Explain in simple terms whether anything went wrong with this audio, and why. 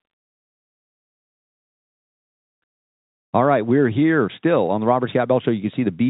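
Nothing went wrong: the speech carries the narrow, phone-line sound of ordinary G.711 telephone coding, which keeps nothing above 4 kHz, and that is simply how a normal call sounds.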